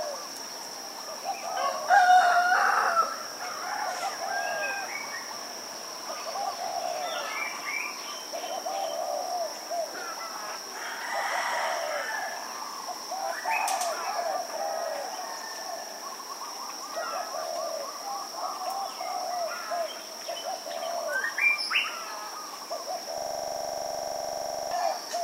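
From 23.18 to 24.71 s a system hang loop takes over: one 42.67 ms slice repeats exactly, 36 times, at 23.4 per second, which fits a 2048-sample buffer cycling while the computer froze. Unlike a dropout, the sound never goes silent. The identical slice keeps repeating.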